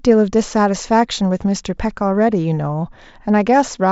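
No faults detected in the speech recording; nothing to report.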